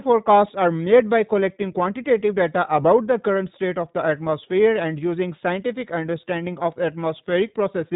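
From start to finish the speech sounds thin, slightly rough and synthetic, with nothing above about 3.8 kHz. That is iLBC codec damage: each 20 ms frame's excitation is coded on its own, and the plainly audible coarseness fits the 15.2 kbps mode.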